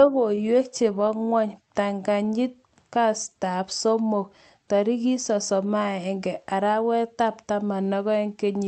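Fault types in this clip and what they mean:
Lost packet rebuilt from error correction: three 40 ms stretches of speech, at 0.37–0.41 s, 0.45–0.49 s and 1.05–1.09 s, were missing from the stream but filled by the lower-bitrate redundant copy that Opus carried in the following packet, so the audio never drops out. Instead, each rebuilt stretch sounds briefly rougher and noisier than its surroundings, heard against the band-limited Opus call audio extending to about 8 kHz.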